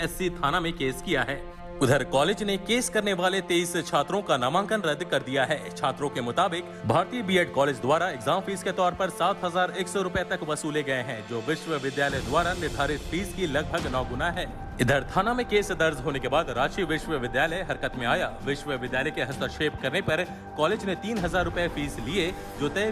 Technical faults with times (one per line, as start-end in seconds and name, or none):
none